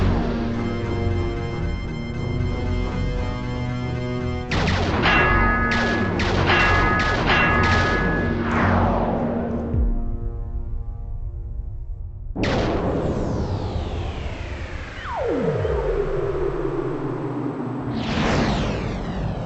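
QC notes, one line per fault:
Throughout: stereo read as mono. Alternating left and right samples play as one channel, so the sound runs at half speed, an octave low.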